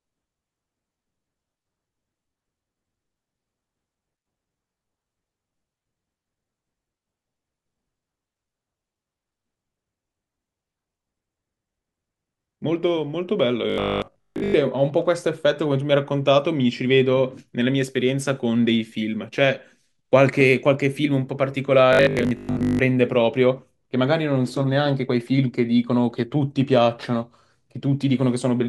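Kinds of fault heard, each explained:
Robotic sound from repeated short buffers: at 13.70 to 14.54 s and 21.93 to 22.79 s the speech turns into a rigid metallic buzz fixed at 50 Hz. That fits a 20 ms block being replayed, likely because new audio arrived too seldom, so most real audio is skipped.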